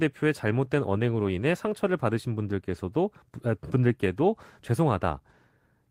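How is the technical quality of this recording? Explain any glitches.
Listening to the recording, nothing stood out as a technical problem, and there are no glitches to explain.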